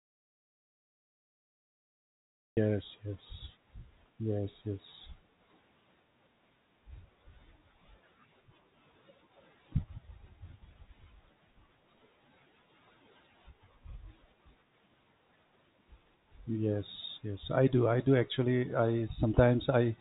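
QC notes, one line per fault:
0.00–2.57 s, audio dropout to silence: the clip opens mid-gap in silence with no room tone, then speech cuts in abruptly, likely because the input was lost or muted while recording ran on. The waveform is a dead flat line and the spectrogram is fully blank.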